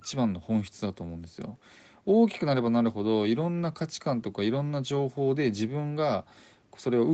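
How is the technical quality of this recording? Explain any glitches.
No glitches are audible anywhere in this speech.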